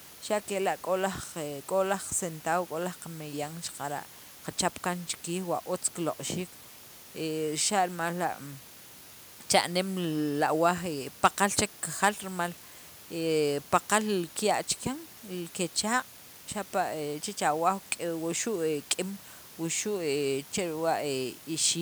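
A steady, even hiss sits under the speech from start to finish, roughly 20 dB below it, with no distortion. This is low bit depth with dither: the sound fits a 7-bit signal, where added dither turns rounding error into constant white noise. The quieter room noise, about 32 dB below the speech, is part of the recording.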